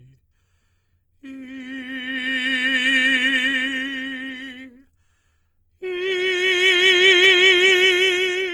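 All the way through this music there are the artefacts of a heavy low-bitrate encode, with nothing above about 20.1 kHz. It's likely low-bitrate audio saved at a high bitrate, which fits an Opus stream near 24 kbit/s re-encoded as 192 kbit/s MP3. The bigger file can't restore what the first pass removed.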